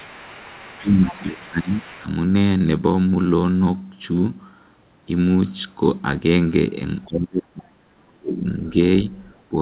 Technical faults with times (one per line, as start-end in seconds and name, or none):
0.00-0.81 other side's voice leaking through
0.81-2.06 speech suppressed in double talk
1.07-2.04 other side's voice leaking through
7.04-7.12 other side's voice leaking through
7.08-8.44 speech suppressed in double talk
9.15-9.20 other side's voice leaking through